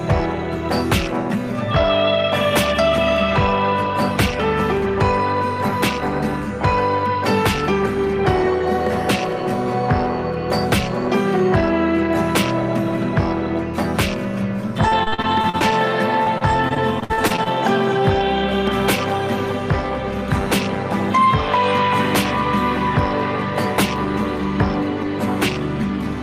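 From 14.88 to 15.74 s and again from 16.24 to 17.48 s, repeated packet loss (robotic sound) breaks up the audio: runs of short dropouts, none longer than 57 ms, are bridged by extending the preceding sound, concealing about 27% and 21% of the two stretches and giving a choppy character.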